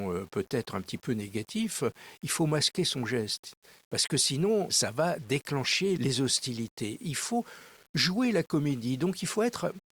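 From start to finish the speech carries a grainy, rough distortion that rises and falls with the sound itself, sitting at about 30 dB below the signal. Quiet syllables and word tails turn gritty and sputter rather than fading smoothly. This is low bit depth without dither: the likely cause is samples rounded to a coarse grid, which fits 8-bit rounding, so the error tracks the waveform as distortion instead of spreading into steady hiss.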